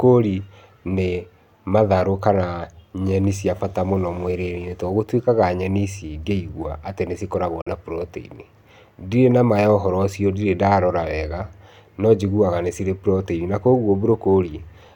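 At 7.61 s the speech drops to silence until 7.68 s, a gap of about 60 ms, most likely a Bluetooth dropout where audio packets missed their deadline to the headphones and were discarded. The speech resumes as if it had played on through the hole, and the missing audio fits two lost frames. On a waveform it shows as a flat-line notch, and on a spectrogram as a clean vertical blank band across all frequencies.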